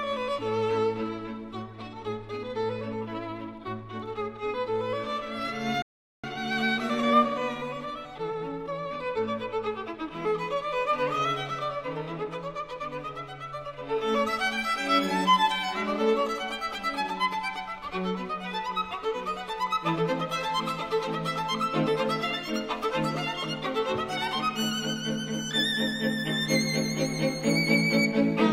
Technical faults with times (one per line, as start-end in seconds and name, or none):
5.82-6.24 playback stall
6.24-9.24 time-compressed catch-up